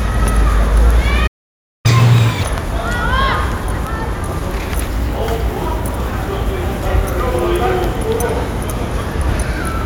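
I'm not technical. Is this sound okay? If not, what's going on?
No. At 1.27 seconds the player most likely ran out of data or got held up, a playback stall. The sound cuts out mid-flow and stays silent for just over half a second, until it resumes at 1.86 seconds.

Straight after, the player plays the backlog faster to make up lost time, a catch-up at higher speed. From 1.86 to 2.43 seconds the sound runs at double speed and much higher pitch, then drops back to normal.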